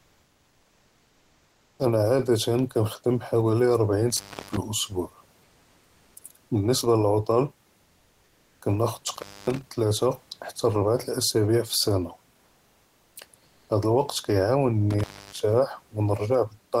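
Comfort noise in place of the background, 0.00 to 1.79 s: the real room background gives way to a steady, featureless hiss about 2 dB quieter, likely because the sender stopped transmitting during silence under discontinuous transmission and the receiver synthesised filler noise. The background sits about 42 dB below the loudest sound.

Intermittent contact, 4.10 to 4.57 s: a loose connection opens for about 0.29 s. The sound drops out with crackle at each edge and faint hiss while the line is broken.

Comfort noise in place of the background, 5.43 to 6.15 s: the same smooth, detail-free noise replaces the room background, this time at the same level, with the background about 40 dB down.

Intermittent contact, 9.08 to 9.62 s: the line opens for about 0.25 s, cutting the sound with crackly edges and leaving hiss.

Comfort noise in place of the background, 13.45 to 13.69 s: a brief 0.24 s stretch of flat synthetic noise, about 6 dB quieter than the real background.

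Intermittent contact, 14.90 to 15.40 s: the final break lasts about 0.29 s, again with crackle at the edges and hiss while the line is open.

Steady room noise about 40 dB below the speech runs through the clip and is part of the recording.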